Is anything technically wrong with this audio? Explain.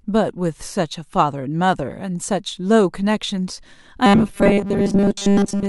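Yes. From 4.06 s to the end, a stalled stream likely had its last 5 ms buffer repeated in place of most of the real audio, giving robotic sound from repeated short buffers: a rigid 200 Hz metallic buzz over the speech.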